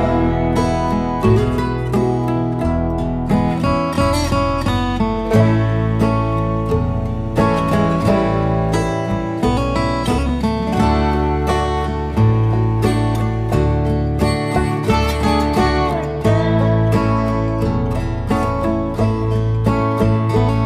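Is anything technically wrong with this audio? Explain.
No, nothing technically wrong can be heard in this audio, and the signal stays intact and steady throughout.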